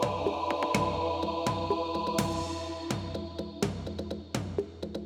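No technical faults can be heard anywhere in the recording.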